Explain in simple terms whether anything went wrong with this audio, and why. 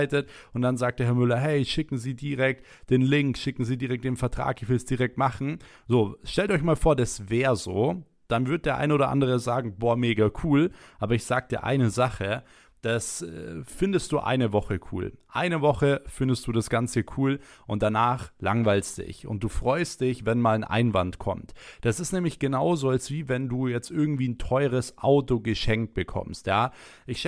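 Nothing went wrong; the recording sounds as it should.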